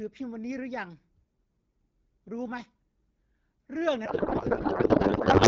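From 4.05 s to the end, a codec payload misread replaces speech with garbled warble. Octet-aligned AMR was unpacked as bandwidth-efficient. It persists steadily, unlike brief packet-loss dropouts.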